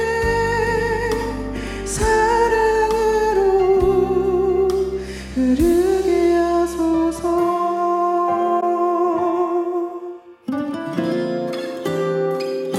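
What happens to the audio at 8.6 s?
At 8.6 to 8.63 s the decoder hits an AAC frame loss with muting: a missing block of coded audio, which fits a single lost frame, has its spectrum zeroed. The overlapping windows fade the sound out and back in, leaving a brief dip of about 21 ms.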